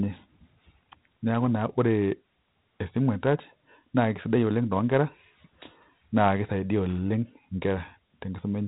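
Speech with heavy 4-bit ADPCM compression throughout: gritty hiss that tracks every loud syllable, and a spectrogram blank above 3.9 kHz, which fits a 32 kbps stream.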